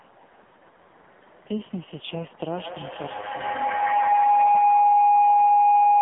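Speech that sounds thin, buzzy and synthetic throughout, with nothing above 3.8 kHz and a band of roughly 150 Hz to 3.6 kHz. That is heavy damage from the AMR narrowband mobile codec, which fits its lowest 4.75 kbps mode. From 2.55 s to the end, a tone of around 700 Hz swells to about 8 dB above the speech and pulses roughly every 150 ms. This is feedback howl: two devices sharing the call in one room, with the loop gaining level on each trip.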